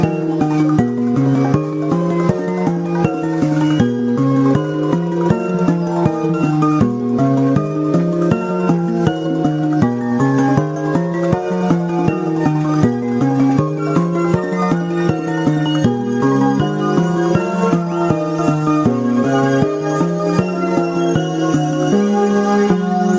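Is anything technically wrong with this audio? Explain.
No, there are no technical faults.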